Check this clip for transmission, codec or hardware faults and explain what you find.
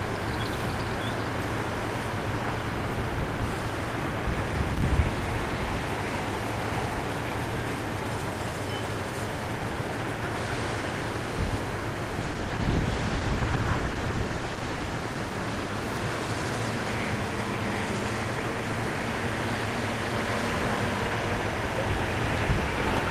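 One fault is present: a call bitrate drop. From 12.23 to 16.31 s the audio turns coarse, watery and muffled, worst for about 2.5 s. The call's bandwidth estimate fell, so the encoder spent far fewer bits and trimmed high frequencies. The sound fits a fall from about 32 to 15 kbps.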